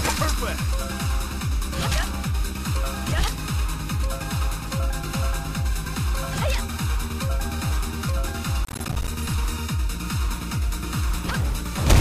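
From 8.65 to 9.08 s there is a burst of processor overload crackle lasting a little under half a second. The processing could not complete its short buffers on time, which points to blocks of around 10 ms, and roughly twenty of them missed their deadline in close succession. Each miss dropped out to silence with abrupt edges, so the sound breaks into a rapid, gritty tearing that stops once the load clears.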